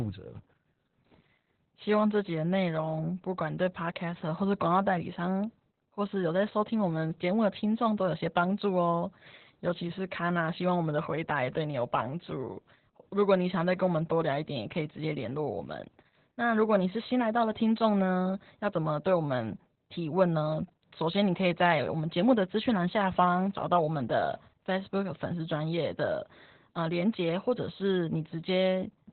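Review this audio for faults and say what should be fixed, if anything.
Throughout, the speech sounds muffled, hoarse and robotic, with nothing above 4.3 kHz. This is heavy Opus voice compression: coarse narrowband SILK coding that fits an 8 kbps stream. To prevent it, encode at a higher Opus bitrate so the encoder keeps a wider band and codes the excitation more finely.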